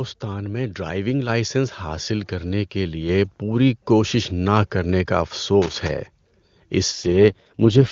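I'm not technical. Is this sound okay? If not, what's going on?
No. At 1.29 s, just after "میں ڈرائیونگ", and again at 3.09 s, just before "پوری کوشش نہ کرنے", the voice and background both suddenly get louder together. This is the microphone volume being stepped up: the calling software decided the microphone was too quiet and raised it in a single jump each time.

From 5.62 to 5.90 s, right after "کوشش نہ کرنے کا", there's a short burst of scratchy crackling. That's loose connector crackle, likely a worn or dirty plug or socket briefly losing and regaining contact as it moves, chopping the sound into noisy fragments.

From 6.91 s until the clip ends, the voice turns rougher and more artificial, though nothing cuts out and it doesn't sound muffled. This is an AMR rate drop: on a weak mobile signal, the phone network told the HD Voice speech system to describe the voice in less detail, shifting that effort toward protecting the call from errors instead.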